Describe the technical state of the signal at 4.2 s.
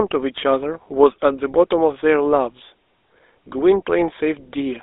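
At 4.2 s you're hearing the GSM full-rate codec across the whole clip: pulse-driven excitation makes the speech plainly buzzy and gravelly, nothing above 3.8 kHz, fitting 13 kbps coding.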